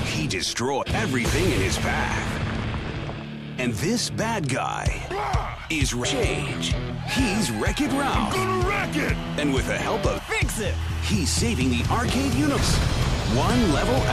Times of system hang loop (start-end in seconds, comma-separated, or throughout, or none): none